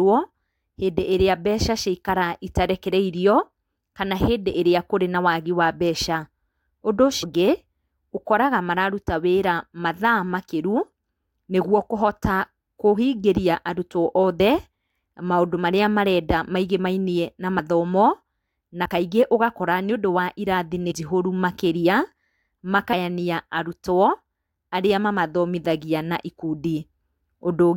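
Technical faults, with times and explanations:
4.54, 7.22–7.24, 14.40, 17.59, 18.85, 20.90–20.92, 22.92–22.94 s, compressed frames skipped: the speech jumps ahead by roughly 10 to 150 ms where frames are left out, visible as small spectrogram discontinuities.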